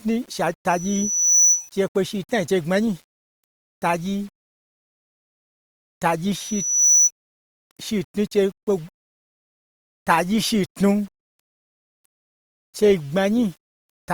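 Across the whole speech clip runs a grainy, rasping distortion, around 35 dB below the voice, that rises and falls with the speech. Quiet syllables and word tails turn gritty and sputter instead of fading cleanly. This is likely low bit depth without dither, consistent with rounding to about 8 bits. Unlike steady hiss, which sits evenly under the sound, this error tracks the signal itself, so it changes character with every syllable.

From 0.69 to 1.73 s a loudspeaker feedback squeal sets in: a single pure tone at 5.9 kHz swells over roughly 0.7 s until it stands about 5 dB above the speech, then stops. It returns at the same 5.9 kHz from 6.35 to 7.11 s, this time building in roughly half a second. The microphone was picking up its own loudspeaker, and at that frequency the loop gain passed one. A constant interfering whistle would start at full level. This tone grows out of nothing and repeats at the same pitch, which marks it as acoustic feedback.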